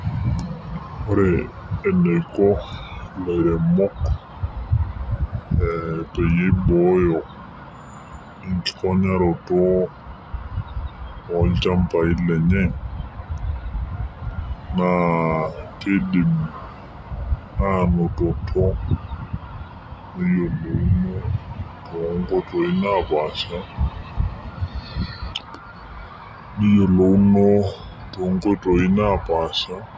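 Throughout the speech, the wrong sample rate is at work. Playback runs at about 0.73 times the original speed. Pitch drops about 5.5 semitones with it. Voices sound low, slow and heavy. This fits 22 kHz audio played at 16 kHz without conversion.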